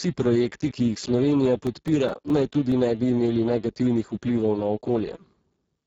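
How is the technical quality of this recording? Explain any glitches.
The recording is heavily degraded throughout and has a short burst of ticking partway through.

Across the whole clip the speech sounds hoarse, buzzy and at times robotic, with a grainy noise layer instead of clean consonants. Nothing is present above 7.7 kHz. This is Speex codec damage. Speex, a CELP codec from older VoIP and game chat, rebuilds the voice from a simple model plus a coded excitation signal. The heavy damage here points to a very low setting, which fits a bitrate near 6 kbps. So few bits remain for the excitation that the voice loses its natural texture, and the region above 4 kHz becomes a shaped noise fill rather than real detail.

From 1.46 to 2.72 s, right after "projekti ki jih" and ending before "ne bi", seven regular ticks and tiny dropouts are audible. They come about five or six per second, and the longest lasts only a few milliseconds. 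These are CD scratch ticks. A blemish on the disc wipes out more data than error correction can repair once per revolution. The player then interpolates or mutes those samples, leaving a rhythmic click each turn.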